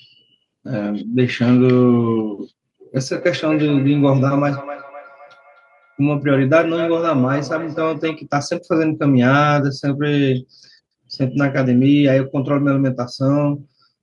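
From 3.1 to 8.3 s, a second device in the same room is on the call and plays back what this microphone sent, and the microphone picks that playback up again. Its echo canceller only removes sound from its own loudspeaker, so this loop goes unchecked: feedback echo between two devices. Each stretch of speech returns as a delayed copy roughly 300 ms later, peaking about 14 dB below the direct speech.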